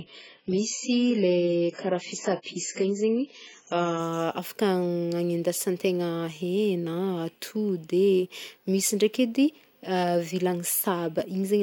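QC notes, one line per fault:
0.0–4.0 s, adaptive stream starting at a low bitrate: the speech opens dull and smeared, with nothing above 7.6 kHz and stronger codec artefacts. That fits a player beginning on a stream of only about 12 kbit/s and stepping up to roughly 96 kbit/s once it had gauged the connection. On a spectrogram the top band is empty until 4.0 s, then fills in abruptly. The waveform shows no gap at the switch.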